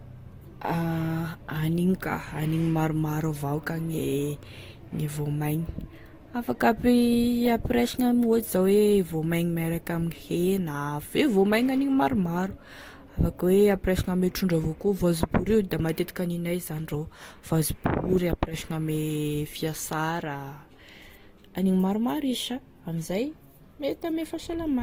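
Throughout the speech, the sound carries two layers of compression damage at once. Nothing is present above 19 kHz. The artefacts of both codecs are heard together. The likely cause is transcoding between lossy codecs. The character fits a Vorbis encode near 48 kbit/s followed by an Opus encode near 32 kbit/s. The second encoder spent bits on the first one's artefacts, then added its own.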